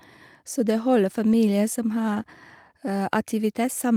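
Lost packets rebuilt from error correction occur at 1.31 to 1.33 s and again at 2.15 to 2.21 s. The first rebuild spans 20 ms, which fits a single lost packet. The second spans 40 ms, consistent with two separate lost packets. Each time, the following packet carried a low-bitrate spare copy of the missing speech, and the decoder played that copy instead. The speech never drops out, but those moments turn briefly rougher and noisier.

Short concealed packet loss follows at 2.23 to 2.27 s, just after the second rebuild. Here 20 ms of speech arrived too late or not at all, and no spare copy covered it. The receiver filled the hole by extending the sound that came just before, either from its pitch or as shaped noise, then blended back into the real signal. It comes across as a brief smear or wobble.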